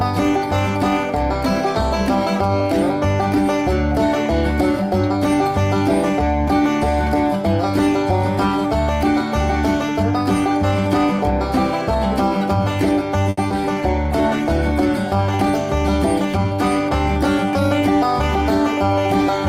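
There's a cluster of network trouble in this audio, starting just past 13 s. First, from 13.29 to 13.39 s, there's a short stall from a late packet. The jitter buffer ran dry, so the receiver held the last sound for about 80 ms until the packet turned up, then carried on from the same spot. Nothing's lost, but that sound drags, and playback now sits 80 ms later. Right after, at 13.49 to 13.52 s, comes a short concealed packet loss. About 40 ms never arrived in time. Only around 10 ms of that got patched by extending the last sound, so the rest is just skipped, which pulls the delay back by roughly 30 ms. You hear it as a quick smear or wobble. Then from 13.73 to 15.37 s there's a call bitrate drop from 32 to 17 kbps, bottoming out for about a second. The encoder is coding much more coarsely there, so the sound goes rough before the bitrate recovers. Finally, from 16.26 to 16.90 s, there's a jitter buffer speed-up. 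The buffer was holding more audio than it wanted, so it trimmed tiny pitch-period slices, roughly 70 ms in total. That runs the audio about 8% fast at unchanged pitch, and it sounds hurried.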